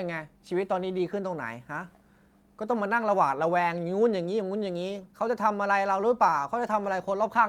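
No technical faults can be heard anywhere in the recording.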